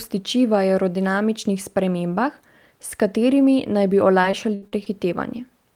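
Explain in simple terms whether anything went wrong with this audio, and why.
Repeated packet loss (robotic sound) hit the speech from about 4.21 to 4.88 s, right after "s katerimi naj bi". Pieces of the audio went missing about five times in quick succession, the longest hole around 70 ms. Each hole was patched by stretching the sound just before it, so about a quarter of that stretch is filler rather than real speech. As a result, this part sounds choppy, with small bits clipped out.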